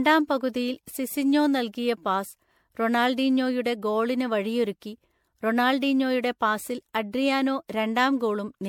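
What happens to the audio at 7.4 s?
At 7.4 s the speech sounds swirly, smeared and hollow, with blurred attacks, as it does throughout. This is likely generation loss from around ten lossy re-encodes, which fits MP3 at 96 kbit/s.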